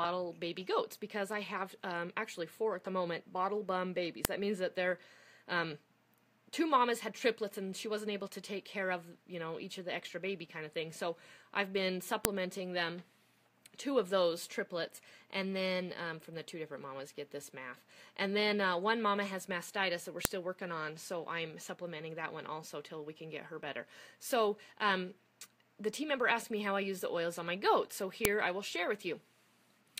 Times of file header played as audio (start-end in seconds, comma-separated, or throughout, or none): 4.25, 12.25, 20.25, 28.25